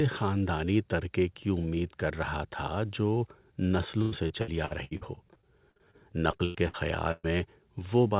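From 4.02 to 5.95 s the speech breaks up with repeated packet loss, giving that choppy, robotic quality. There are fourteen separate holes, the longest about 98 ms, adding up to roughly half a second of missing audio. Each hole gets papered over by stretching the last bit of sound, so about a quarter of that stretch is really repeated filler rather than actual speech. The same thing comes back from 6.31 to 6.76 s with four gaps, the longest 90 ms, totalling about 180 ms lost. It's denser this time, with over 40% of that short span concealed.

Then at 7.12 to 7.26 s there's a single burst of packet loss, about 120 ms dropped in one go. The receiver holds the last sound and fades it out, so you hear a short sustained buzz or hiss, then roughly 10 ms of actual silence before the speech picks up further along, skipping whatever was in that gap. Throughout, the audio has nothing above 4 kHz, which points to a narrowband call codec.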